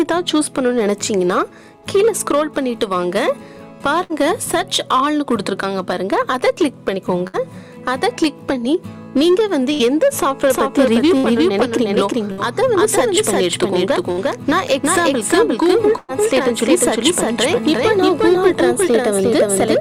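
At 4.03 s, 7.27 s and 9.74 s there are bursts of packet loss, each about 90 ms long. In each, roughly 60 ms of audio never arrived, and the receiver filled the hole by stretching the last sound and fading it, giving a brief held buzz or a dying hiss before the sound jumps ahead. On a spectrogram each appears as a short band of flat, smeared harmonics that dims toward the gap's end, followed by a hard seam.

From 10.50 s to the end, a doubled audio track appears. A second, full-band copy of the sound trails the original by about 0.4 s at roughly the same level. It is likely an extra capture through a slower path or two misaligned copies in an edit. It lacks the fading tail or room colouring that a real echo would have. On the waveform the envelope abruptly thickens at 10.50 s. On the spectrogram every event repeats as an identical twin shifted right.

The same packet-loss pattern continues at 11.17 s, 12.32 s and 14.12 s, each again about 60 ms missing and concealed. 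The longest burst runs from 15.97 s to 16.11 s. About 120 ms is lost there, and the concealment stretches over 110 ms without ever reaching silence. This makes a noticeably longer frozen buzz or hiss, visible as a wider band of flattened spectrum.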